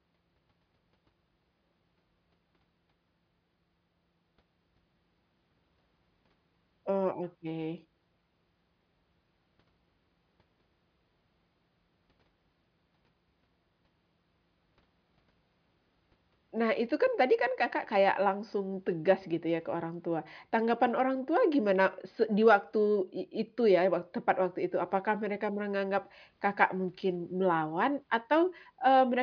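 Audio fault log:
Nothing to log here: this speech clip runs along with no faults to report.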